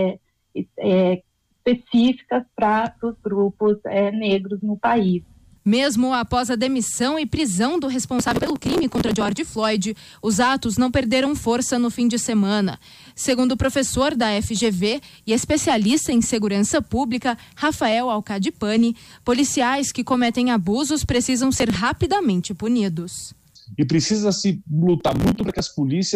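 From 0.65 s to 24.51 s a single click recurs every 2.22 s, about ten in all. The steady spacing points to clock drift buffer slips, likely from two clocks disagreeing by roughly 70 ppm, so roughly 7 samples are dropped or repeated each time.

Processor overload crackle comes in bursts at 8.19–9.38 s, 21.57–21.79 s and 25.00–25.60 s. Many missed deadlines leave skipped gaps, which fits a buffer of about 5 ms. The result is dense, gritty tearing rather than one isolated, evenly timed click.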